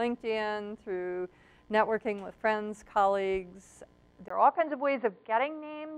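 At 4.28 s the audio drops out for about 20 ms, then turns dull and boxy to the end, likely an input switched to a poorer device. A spectrogram shows everything above 4.7 kHz cut off, plus a faint new noise floor roughly 50 dB down. The waveform keeps about the same level.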